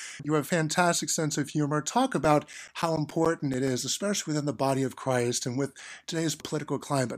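CD scratch ticks run from 2.25 to 3.68 s, just before "especially within the body": eleven short clicks at roughly eight per second, the longest around 10 ms. A blemish on the disc defeats error correction once per rotation, so the player patches or mutes those samples.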